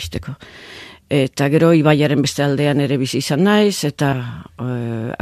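At 4.12 s the audio jumps forward by roughly 150 ms, a gap that points to about seven skipped compressed frames of 21.3 ms each that the decoder never played.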